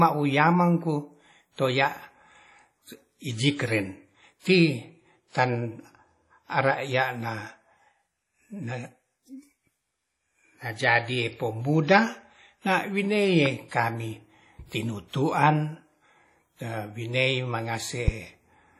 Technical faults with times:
0.00-18.80 WMA compression
13.46-13.48 loud pop
18.08-18.10 loud pop

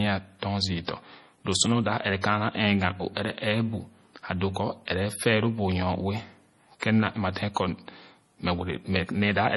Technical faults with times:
0.00-9.56 MP3 compression
6.80-6.82 pre-echo

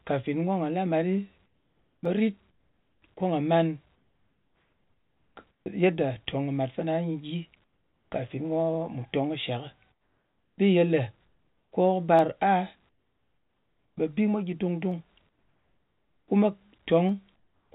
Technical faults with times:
1.46-3.02 comfort noise in place of the background
2.05 dropped samples
3.95-5.66 comfort noise in place of the background
7.64-8.12 comfort noise in place of the background
9.92-10.58 comfort noise in place of the background
11.27-11.72 comfort noise in place of the background
12.19 dropped samples
12.89-13.97 comfort noise in place of the background
14.92 dropped samples
15.29-16.28 comfort noise in place of the background
17.09 dropped samples
17.36-17.72 comfort noise in place of the background

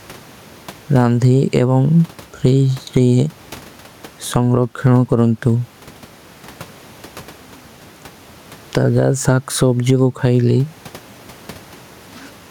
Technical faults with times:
0.00-12.51 gain pumping

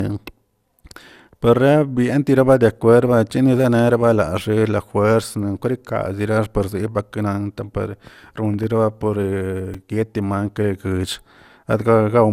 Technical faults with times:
0.00-12.32 generation loss
5.23 repeated buffer
9.74 repeated buffer

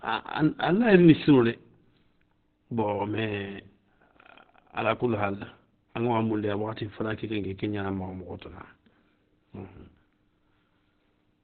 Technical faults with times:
0.00-11.43 Opus compression

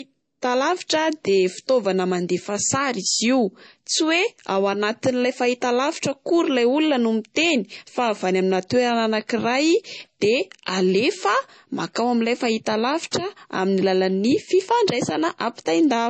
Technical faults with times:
0.00-16.09 low-bitrate audio saved at a high bitrate

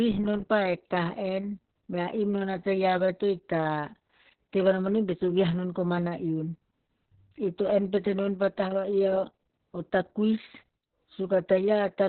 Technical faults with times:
0.00-12.08 Opus voice compression

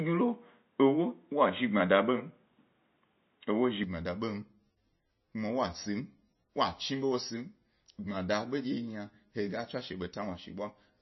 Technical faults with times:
0.00-11.02 MP3 compression
0.00-3.83 input switched to a poorer device

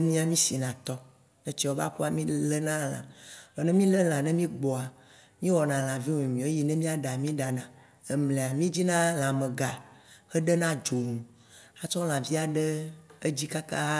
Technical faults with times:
none

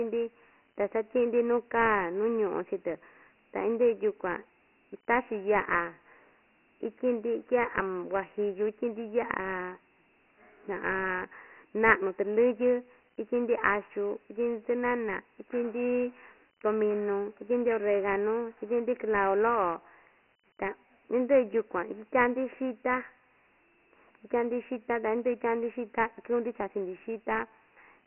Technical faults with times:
0.00-28.07 Dialogic VOX ADPCM

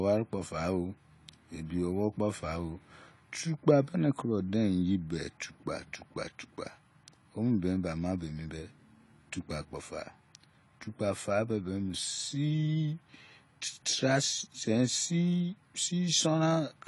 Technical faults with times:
0.00-16.87 AAC compression

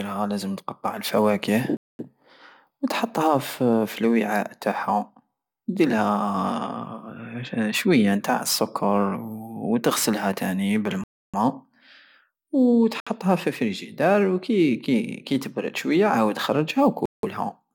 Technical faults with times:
1.77-1.99 Bluetooth stall
11.04-11.34 Bluetooth stall
13.00-13.07 Bluetooth stall
17.05-17.23 Bluetooth stall

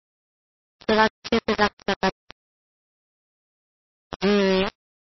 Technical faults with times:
0.00-5.06 low bit depth without dither
0.00-5.06 MP3 compression
1.28-1.48 pre-echo
1.86-2.03 pre-echo
4.10-4.22 pre-echo

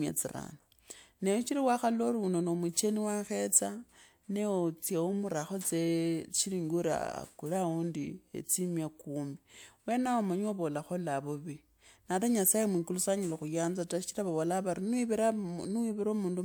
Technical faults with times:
none

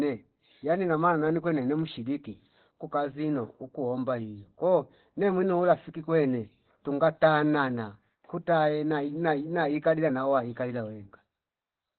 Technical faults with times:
0.00-11.99 Opus compression

